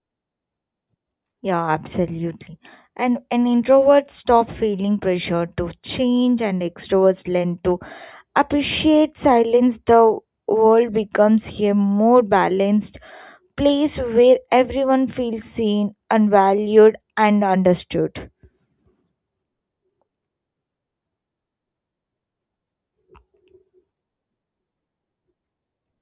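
No technical faults can be heard.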